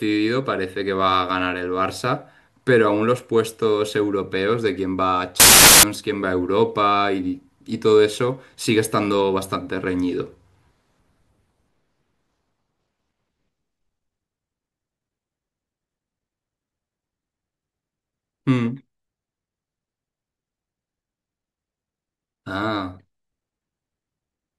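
From 5.40 to 5.83 s the speech is swamped by a burst of loud, harsh broadband noise. These are samples built from the wrong bytes: each value is assembled from misaligned or swapped bytes, so the rapidly changing low bits dominate and bury the signal.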